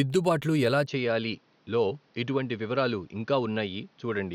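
Speech that, from 0.87 s, loses everything above 6.5 kHz, drops about 5 dB and gains a new noise floor, which a simple filter wouldn't add: likely an input switched to a poorer device.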